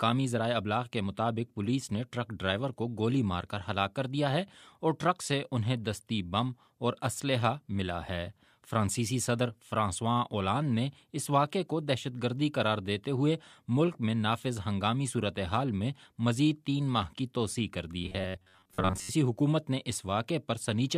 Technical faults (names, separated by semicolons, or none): robotic sound from repeated short buffers